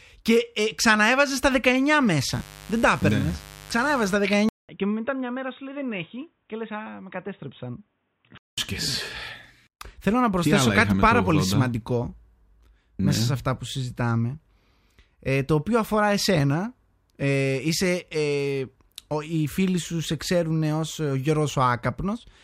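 From 2.32 to 4.15 s a raspy mains buzz built on 50 Hz harmonics sits roughly 20 dB under the speech, from switching spikes leaking into the signal path. At 4.49 s the sound drops out for 200 ms, then returns duller, slightly quieter and band-limited above 3.8 kHz until 8.58 s, likely an input switched to a poorer device.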